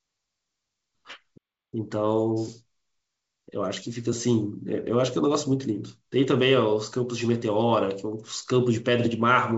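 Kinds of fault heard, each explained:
Playback stall: The speech stops abruptly at 1.37 s and the output stays silent until 1.74 s. That is a gap of about 0.35 s in mid-flow. The speech then resumes rather than fading back in. The likely cause is the player running short of data or its thread being briefly blocked, so nothing reached the output. The wideband telephone sound, cut off above about 7.7 kHz, is the same on both sides of the gap.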